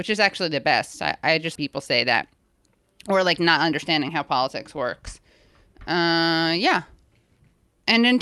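At 1.55 to 1.68 s, just after "best I I just", a skip ahead occurs: the receiver discarded roughly 0.7 s of queued audio, so the speech lurches forward with missing syllables spliced almost seamlessly. A jitter buffer speed-up follows from 2.14 to 2.39 s, where the over-full buffer trimmed pitch periods, making the speech run about 14% fast at unchanged pitch. It recurs more gently after "or like" from 3.49 to 5.02 s, at about 5% faster, sounding slightly hurried.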